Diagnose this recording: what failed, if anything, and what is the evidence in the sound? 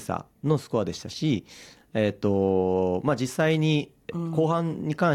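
Nothing failed here: no stage between capture and playback shows any fault audible in the sound.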